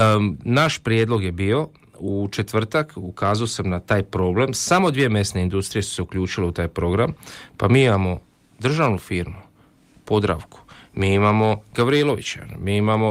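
A speech clip with one lost packet rebuilt from error correction, at 2.25 to 2.27 s. There is no gap or dropout. Instead, a brief 20 ms stretch sounds rougher and noisier than the speech around it. That fits a single packet going missing in transit. The next packet carried a low-bitrate spare copy of it, Opus in-band forward error correction, and the decoder played that coarser copy in its place.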